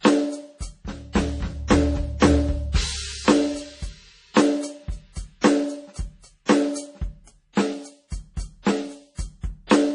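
From start to finish this music sounds heavily squeezed, most likely by MP3 compression. There's a hard ceiling at 10.4 kHz with nothing above it, and the damage is heavy enough to suggest a bitrate of around 32 kbps. With so few bits, the encoder drops the treble outright and lets quieter frequency detail flicker in and out between frames, so the texture turns watery and swirly and the attacks come out smeared.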